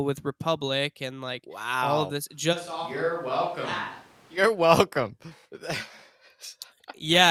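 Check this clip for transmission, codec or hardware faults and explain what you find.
One fault is present: a switch to a distant microphone from 2.54 s to 4.36 s. The close microphone's feed most likely dropped out, leaving a farther microphone to carry the signal until the close one returned. The speech abruptly turns roomy and hollow, with less bass, falls by roughly 10 dB, and picks up background noise sitting around 25 dB below the speech. At 4.36 s the close, fuller sound snaps back just as suddenly.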